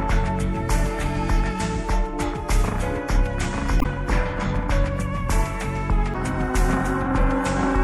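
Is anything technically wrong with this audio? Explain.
Yes. Throughout the clip the sound has a watery, swirly character with dulled treble and smeared attacks, which is plainly audible and likely MP3 compression at a low bitrate, consistent with about 64 kbps. Starved of bits, the encoder cuts high frequencies and drops weak components that flicker frame to frame.

Damaged data in a compressed stream appears twice, from 3.78 to 3.86 s and from 6.11 to 6.16 s. Corrupted bytes make the decoder misread frames and resynchronise on the next header, which produces a brief chirp or blip.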